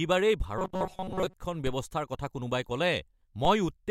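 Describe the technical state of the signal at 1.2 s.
At 1.2 s, robotic sound from repeated short buffers (0.58–1.34 s): a metallic 188 Hz buzz, likely a looped 5 ms buffer displacing most audio.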